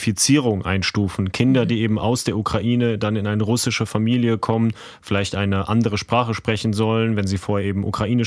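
A speech recording in which no technical fault can be heard. No moment in the audio stands out, so there are no times or causes to report.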